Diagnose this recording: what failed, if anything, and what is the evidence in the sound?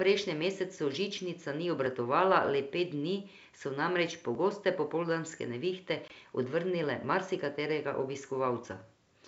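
Buffer or driver stage: the speech skips at 1.86 s and again at 4.35 s, each time losing around 15 ms with the two sides butted together. The spacing of roughly 2.5 s points to audio missing between chunks, likely from a recorder dropping samples at each chunk handover.

Network and call processing stage: a hard-edged silent hole runs from 6.08 to 6.12 s, 20 ms long, which fits one lost packet on an ADPCM call. Zero-filling that gap leaves the decoder's adaptive predictor and step size out of step with the sender's when the speech resumes. The G.722 wideband path at 64 kbit/s is working as expected.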